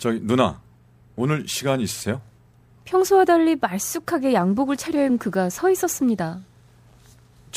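Compressed frames skipped at 5.08 s in this speech recording: a short run of coded frames, likely either missing from the file or rejected by the decoder as damaged, was never played. The audio jumps ahead by roughly 70 ms, which fits about three frames of around 26 ms each. A sliver of the speech simply vanishes.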